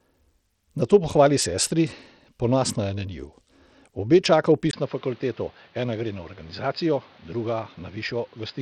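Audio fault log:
throughout: Bluetooth SBC compression. The speech has a gritty, grainy edge and flickering treble, which fits SBC at a low bitrate of around 80 kbps, likely over a Bluetooth link. On a spectrogram the upper bands appear blotchy and intermittent, with speckled noise between harmonics.
4.71–8.61 s: input switched to a poorer device. After a 20 ms gap, the speech turns dull and boxy, roughly 5 dB quieter, with a new noise floor around 30 dB below it, likely from a lower-grade microphone or headset. A spectrogram shows everything above 5 kHz abruptly gone, and the waveform shows a brief flat dropout.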